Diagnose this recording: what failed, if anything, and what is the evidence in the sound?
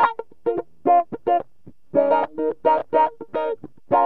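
A repeated-frames fault at the codec or storage stage occurs from 2.79 to 2.81 s. One compressed block of about 23.2 ms plays twice, which fits a 1024-sample frame at 44.1 kHz, producing a brief stutter. Unlike a dropout, nothing is lost: the passage simply runs 23.2 ms longer.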